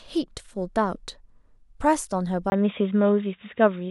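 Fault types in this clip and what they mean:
Input switched to a poorer device: at 2.5 s the speech turns dull and boxy after a 20 ms silence, likely from recording moving to a lesser microphone. The spectrogram shows nothing above 3.8 kHz, with a faint new noise floor and a small level step in the waveform.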